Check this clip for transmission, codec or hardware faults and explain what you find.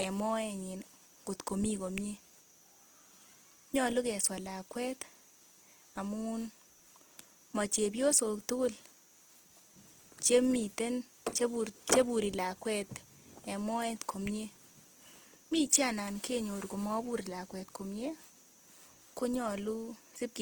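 One codec fault runs through the whole speech clip. Throughout, the grainy, rough texture is likely Opus compression in CELT mode, which fits roughly 16 kbps. Band energies are kept and starved bands are filled by folding or noise, so detail sounds rough rather than swirling with MP3-style holes. The bandwidth stays full, reaching about 20.2 kHz.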